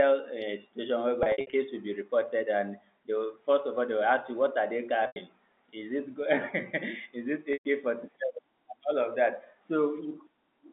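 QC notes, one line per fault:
1.23–1.53 s: packet loss with pitch repetition, right after "a situation". About 180 ms is lost in short runs of up to 60 ms, and repeating the last pitch period makes it sound briefly held and buzzy.
5.07–5.16 s: packet loss with pitch repetition. About 90 ms is missing and bridged by a repeated pitch period, so the sound holds briefly and fades into silence before the speech returns with a short cross-fade.
7.53–7.65 s: packet loss with pitch repetition, right after "is it". About 120 ms is lost, and the repeated pitch cycle briefly holds, then fades into silence until the speech returns with a short cross-fade.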